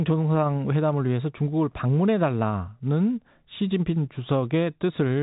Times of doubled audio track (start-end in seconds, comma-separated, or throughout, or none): none